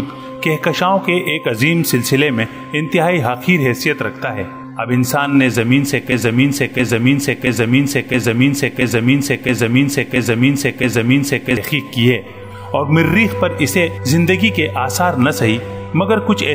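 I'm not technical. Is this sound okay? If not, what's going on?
No. From 6.12 s to 11.57 s the sound gets stuck in a broken-record loop: one piece about 0.67 s long plays eight times back to back. The player or stream likely stalled and kept resending its last fragment, so the audio meant for that stretch is missing.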